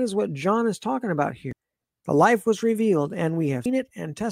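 A short speech clip with two brief glitches, one at 1.51 s just after "is talking about" and another at 3.65 s, each a blip lasting only about 12 to 14 milliseconds. Both come from damaged data in a compressed stream: corrupted bytes make the decoder misread frames and lose sync until it finds the next frame header.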